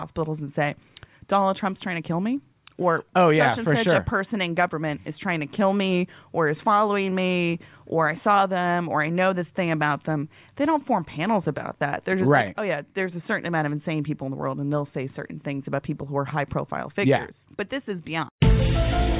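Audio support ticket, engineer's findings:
No faults found on listening; nothing to attribute to any component in the signal chain.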